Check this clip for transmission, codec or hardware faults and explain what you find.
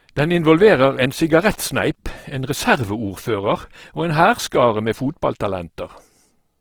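One codec fault runs through the whole clip: likely Opus compression at a very low bitrate. The encoder, working in its music-style mode with too few bits, fills starved bands with folded or noise-like energy. The speech comes out grainy and rough, with audible damage while content still reaches about 20.3 kHz, at roughly 16 kbps.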